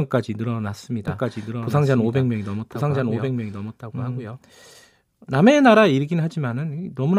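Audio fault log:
1.08–4.38 s: doubled audio track, a second copy of the speech trails about a second behind, roughly 5 dB quieter, dry and abruptly bounded, likely from a duplicate capture path.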